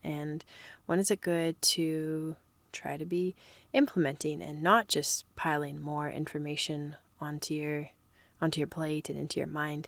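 No technical faults can be heard anywhere in this speech. The Opus voice compression keeps the full audio band with only light coding traces, which fits hybrid coding around 24 kbps, with the linear-prediction layer handling the lower band and a transform layer above 8 kHz.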